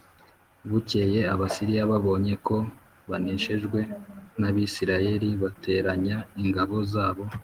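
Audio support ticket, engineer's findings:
No faults found on the speech path; the Opus coding carries the full band with only light coding texture, consistent with a hybrid voice stream at about 20 kbps.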